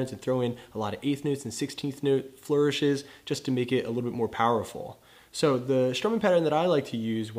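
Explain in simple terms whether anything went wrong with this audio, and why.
Nothing went wrong here as far as I can hear; the whole recording sounds the way it should, with nothing odd popping up anywhere along the way.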